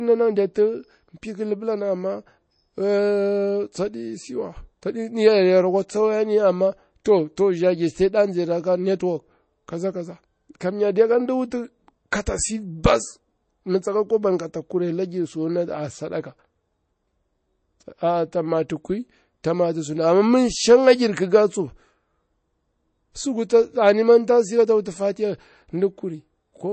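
Across the whole recording the speech carries plainly audible MP3 compression damage: a watery, swirling quality and dulled sibilants, likely from MP3 encoding at a bitrate around 32 kbps. A spectrogram shows a hard ceiling with nothing above 8.3 kHz and flickering, patchy high-frequency detail.

Pre-echo appears at 7.04 s, after "tsa wayani amma" and before "to to za giri"; at 11.50 s; at 12.11 s, before "si bas mi tsaka"; and at 18.69 s, after "a a ta". Coding noise spreads 10 to 13 ms ahead of each sharp onset, heard as a brief hiss. On a waveform, a noisy smear precedes each attack.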